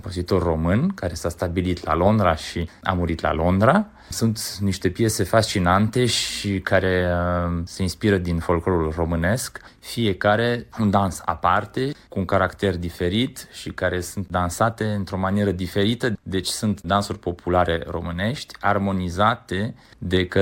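No technical faults can be heard anywhere in the recording.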